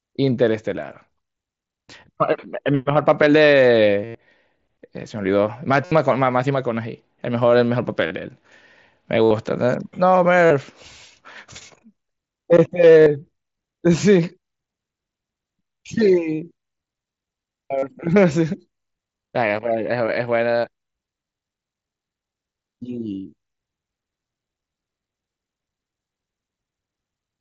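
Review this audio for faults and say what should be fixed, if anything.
Concealed Bluetooth headset packet loss occurs seven times in this speech: 4.05–4.15 s (about 98 ms), 5.85–5.92 s, 8.07–8.11 s, 9.24–9.31 s, 10.46–10.51 s, 13.02–13.06 s and 17.78–17.83 s. Radio packets from headset to phone dropped, and the receiver filled each gap by repeating the best-matching recent slice of waveform. The longer gaps suggest runs of roughly nine to thirteen missing 7.5 ms mSBC frames, and the wideband mSBC codec carrying the audio can be heard up to 8 kHz. The patches sound like a brief buzzy held tone, with a slight warble where real speech resumes. On a waveform they appear as short, suspiciously periodic stretches at steady level. On a spectrogram they show as flat horizontal harmonic bars where formants should be moving.

To prevent it, keep the headset close to the phone with a clear line of sight and away from 2.4 GHz interference such as Wi-Fi, or record through a wired microphone.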